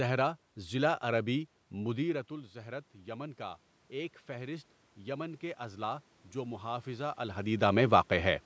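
From 1.76 s to 7.51 s the automatic gain is rising. After the input falls by about 14 dB, as the talker moves away around 2 s, the gain control slowly adds about 9 dB. Speech and room noise swell together, and the waveform envelope and spectrogram noise floor climb gradually.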